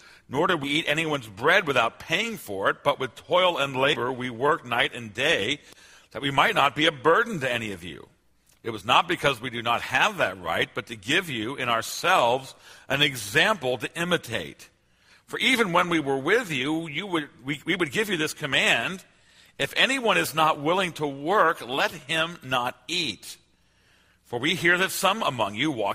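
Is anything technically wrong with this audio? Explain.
Yes, there are two spots where compressed frames are skipped, at 0.63 to 0.68 s and 3.93 to 3.96 s. Whole 20 ms frames go missing, so the sound jumps ahead around 70 ms, then about 100 ms.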